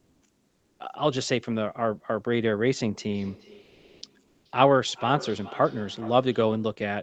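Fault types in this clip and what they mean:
Comfort noise in place of the background: For the opening 0.19 s, and again for 0.36 s from 3.63 s, the room tone turns smooth and featureless, shifting level by about 1 dB. Discontinuous transmission likely stopped sending during pauses, so the receiver filled in synthetic noise.
Feedback echo between two devices: From 3.1 s to 6.83 s the speech comes back at about 17 dB below the original, repeating roughly every 0.4 s. A second device in the room replays the call into the microphone, and no canceller removes that copy.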